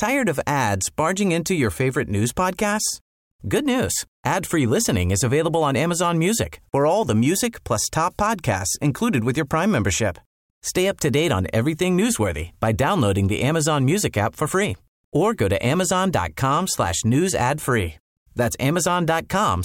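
A recording of speech with no technical faults to point to: nothing audible marks a problem anywhere in the signal.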